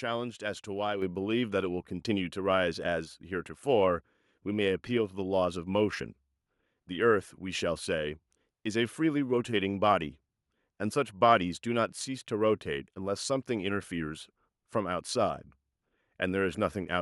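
Microphone volume stepped up at 1.02 s: the call software judged the input too quiet and raised the microphone gain in one step, so speech and background jump about 7 dB louder together.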